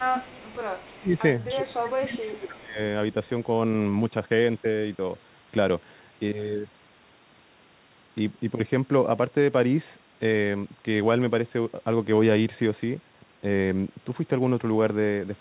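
An echo canceller on the far side, likely fed by a loudspeaker, fails to remove its microphone pickup from 0.0 to 1.01 s. A copy of the speech returns about 297 ms late, roughly 25 dB below the talker, producing an echo leak.

From 1.0 to 1.17 s, with both ends active, the canceller likely cannot tell talker from echo and clamps both. This is speech suppressed in double talk: the level dips by up to about 20 dB for around 150 ms.

Further echo-leak scraps, again 297 ms late, surface at 1.48–1.54 s (about 20 dB down), 2.07–2.24 s (about 25 dB down) and 2.54–2.60 s (about 35 dB down). Over the same stretch, from 1.54 to 2.79 s, double-talk suppression returns. Roughly a second of the talker's speech is pushed down by as much as about 20 dB, so it sounds sunken. All of this sits within the call path's 4 kHz bandwidth.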